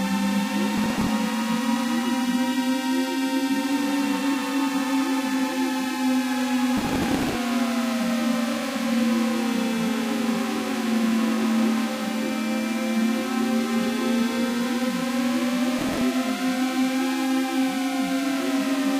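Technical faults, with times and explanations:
0.78–1.09 s, 6.77–7.35 s and 15.79–16.01 s, processor overload crackle: the processor keeps missing its deadlines on tiny buffers of around 5 ms, and each late buffer is simply skipped. That leaves a string of hard-edged gaps, heard as gritty crackle riding on the sound. The middle burst is the longest.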